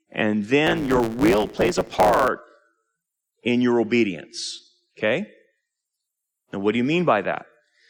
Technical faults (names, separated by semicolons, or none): block size mismatch (truncated)